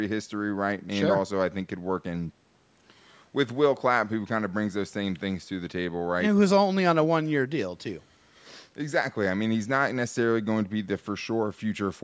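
Nothing stood out on listening to this speech, which has passed through a call's microphone processing.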